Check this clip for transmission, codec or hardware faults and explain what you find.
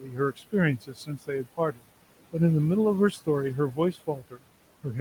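The faults here are all processing damage from an over-aggressive noise suppressor. The room noise itself, sitting about 17 dB below the speech, is simply part of the recording.

Overdone noise removal runs through the whole clip. The reduction was set so strong that any frequency band close to the estimated noise level gets pushed almost to nothing. Between phrases the background collapses into near silence scattered with twinkling specks. The twinkling in the gaps separates this from an ordinary low noise floor, which would stay smooth.

Noise suppressor artifacts are also present throughout, with the steady background cut by about 18 dB. Because the suppressor decides band by band and frame by frame, the residual noise sinks in the pauses and swells back up under the speech. That pumping tied to speech activity marks it as suppressor behaviour, not a level problem in the room itself.

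Speech cut by the noise suppressor occurs at 0.0 to 0.54 s, 0.78 to 1.87 s and 3.73 to 4.44 s, with drops of about 12, 18 and 19 dB. Roughly 0.3 s, half a second and 0.3 s of sound are affected in those spans. The suppressor mistook parts of the speech for noise and lowered them along with it. Unlike the damage heard throughout, these are local losses: parts of words sound swallowed or faint.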